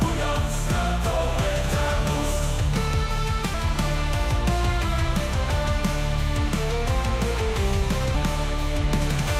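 At 3.54 s and again at 8.15 s, damaged data in the compressed stream makes the decoder misread a frame and lose sync, producing a brief chirp, squawk, click or short hole. A spectrogram shows a thin vertical disruption, and the waveform shows an abrupt discontinuity.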